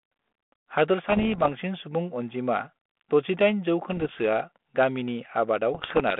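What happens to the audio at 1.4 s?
Bits are being flipped on the ADPCM link, and 1.4 s falls inside a burst of these bit errors on an ADPCM link running from about 1.09 to 1.50 s, with somewhat under one percent of bits corrupted. Each wrong bit throws the G.726 decoder's step size and predictor off track, so the error keeps ringing for a few milliseconds instead of staying a single click. At 1.4 s that comes through as pops and rough, gritty bursts with brief jumps in level.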